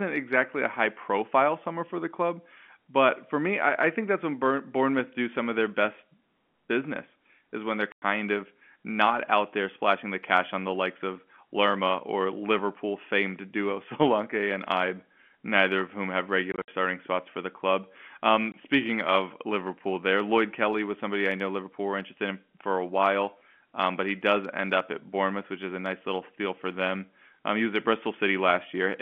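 Hard-edged gaps cut the speech at 7.92–8.02 s, scattered across 16.52–16.68 s, and at 18.52–18.54 s: packet loss filled with silence, with holes fitting 20 ms packets.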